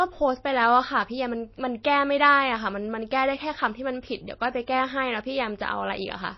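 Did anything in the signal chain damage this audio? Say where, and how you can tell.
Yes, at the codec stage. The speech has nothing above 5.8 kHz and sounds watery throughout. Likely MP3 compression near 24 kbps, dropping treble to save bits.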